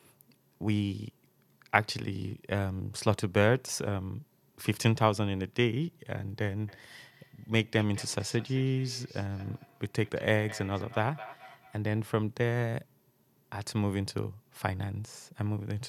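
From 6.68 s to 12.02 s the speech is followed by feedback echo between two devices. A second device in the room plays back this microphone's signal, which is picked up again and missed by the local echo canceller. Repeats arrive roughly every 200 ms, peaking about 18 dB below the speech.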